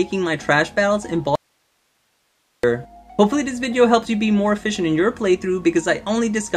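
From 1.35 s to 2.64 s the signal drops out abruptly to a faint residue of hiss, roughly 45 dB below its normal level, for about 1.28 s. The likely cause is a break in the source while the downstream path stayed live. A waveform shows a sudden near-flat gap, and a spectrogram shows a dim broadband noise band.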